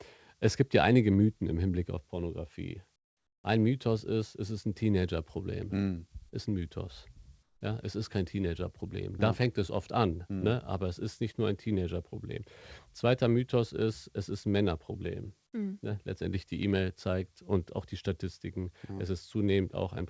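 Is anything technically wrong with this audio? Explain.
Yes. Between 2.96 and 3.44 s, and again between 7.43 and 7.61 s, there is comfort noise in place of the background. The real room sound drops out and a flat, featureless hiss takes its place. It is about 17 dB quieter in the first gap and about 10 dB quieter in the second. This is likely discontinuous transmission: the sender stopped sending during the pause and the receiver generated shaped noise until the speech resumed.

At 6.29 to 6.35 s there is a short concealed packet loss. About 30 ms of audio never reached the decoder, so the receiver extended the preceding sound to bridge the gap and then blended back into the real signal. The result is a brief smear in the speech. The call path itself shows no content above 8 kHz, which fits a wideband codec such as G.722.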